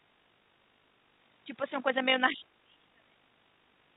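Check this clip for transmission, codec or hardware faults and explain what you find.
One fault turns up, on a G.711-style call path whose sound stops at 4 kHz. From 2.33 to 3.22 s the echo canceller likely mistook double talk for echo and suppressed the speech, which dips by around 35 dB.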